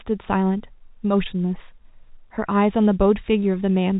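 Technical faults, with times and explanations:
No technical faults can be heard in this speech recording. It has come through G.711 telephone coding, so the band stops near 3.8 kHz and there is at most a faint grain that follows the level of the speech.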